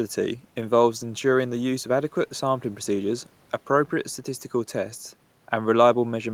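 No technical faults can be heard in this recording.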